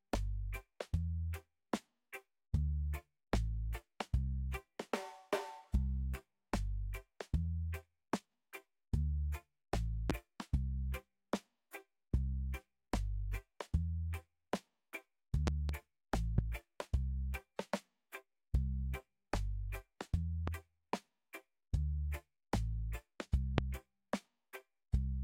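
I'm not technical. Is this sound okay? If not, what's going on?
No. There are five loud pops: at about 10.1 s, a double pop between 15.47 and 15.72 s, then at 16.38, 20.48 and 23.58 s. Each is a sharp click or thump, far louder than the surrounding audio, while the sound carries on underneath. The cause is likely a brief electrical jolt, such as a plug, a switch, static or a glitching device, adding a spike to the signal. The one at 23.58 s is the strongest.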